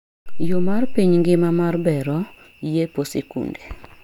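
Speech recording with no audible technical faults.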